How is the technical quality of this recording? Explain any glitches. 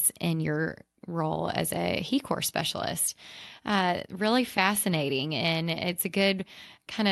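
Listening through the speech, nothing stood out as a glitch or technical problem.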